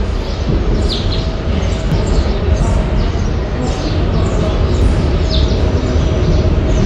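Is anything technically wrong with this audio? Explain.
Yes. There is audio missing between chunks at 1.92 s and 4.82 s. The skips fall about three seconds apart, likely from the recording or processing working in 3-second blocks and dropping a short stretch each time one block closes and the next opens. Roughly a tenth of a second of sound vanishes at each point, and the material on either side butts together with no gap, so the sound jumps abruptly forward.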